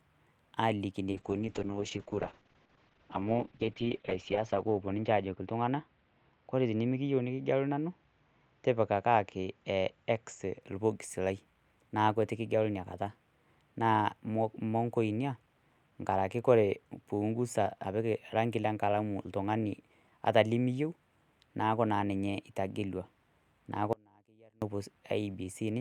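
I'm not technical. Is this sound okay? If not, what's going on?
No. From 1.12 to 10.67 s there is a call bitrate drop. The connection told the encoder to squeeze the voice into far fewer bits, so the speech sounds rough and muffled, with its crisp top end gone. It is worst for about 3.3 s, then recovers before "orbox lai naaku etu".

At 23.93 s there is an audio dropout to a faint residue. The voice cuts out abruptly for about 0.69 s, leaving only a faint trace, then returns at 24.62 s. The likely cause is that the signal was lost while the line stayed open.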